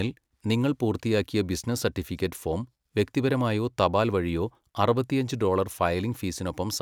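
No technical faults can be heard in the speech at any point, and the signal stays steady and intact throughout.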